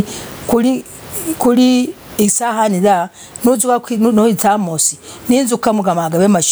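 Gain pumping throughout: input gain likely far too high, a fast limiter clamping each loud sound, so the gain swings about 25 dB.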